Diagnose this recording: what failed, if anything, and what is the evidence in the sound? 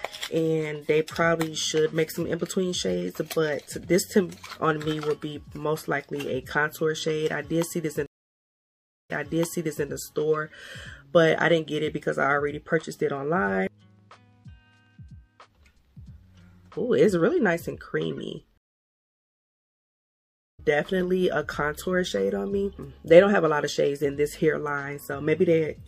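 MP3 compression throughout, at the codec stage: watery, swirling treble and smeared attacks, likely from MP3 encoding at a low bitrate around 64 kbps.

Stream reconnect at 8.06 to 9.88 s and 18.58 to 20.60 s, at the network stage: silences of 1.0 s and 2.0 s, then playback resumes 0.78 s earlier and about two seconds later as a fresh decoder restarts.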